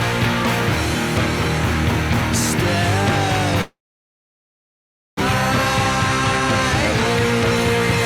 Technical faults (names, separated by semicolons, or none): long network dropout